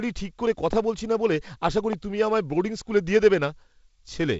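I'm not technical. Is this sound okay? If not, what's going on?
No. There are two loud pops, at 0.73 to 0.75 s and 1.93 to 1.95 s: sharp clicks that jump out above the speech, likely from a sudden electrical jolt such as a plug or switch.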